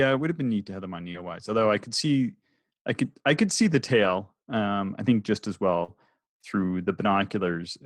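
A speech recording with two kinds of network damage. Short concealed packet loss appears at 1.11 to 1.16 s and 5.84 to 5.90 s. About 20 ms and 40 ms of audio never arrived, and the decoder filled each hole by extending the preceding sound, giving a brief smear or wobble. On a spectrogram these show as smoothed, repeated harmonic texture with blurred onsets. At 1.14 to 1.16 s, 4.04 to 4.10 s and 5.88 to 5.90 s there is also a lost packet rebuilt from error correction. The decoder played the low-bitrate copy carried in the following packet. The 40 ms stretch fits two separate 20 ms packets. These spans sound rougher and noisier but leave no gap in the waveform, only a patch of smeared, grainier spectrum.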